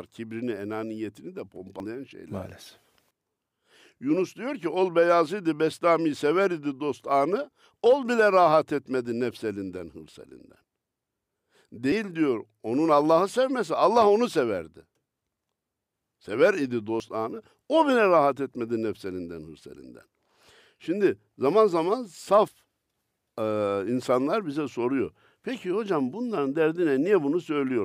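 At 1.8, 10.64, 11.92 and 17.0 seconds the speech jumps forward, losing a few tens of milliseconds each time, nearer 70 ms at 10.64 s, with no silence. These are likely dropped buffers (overrun): unread samples were overwritten and the remaining audio spliced together.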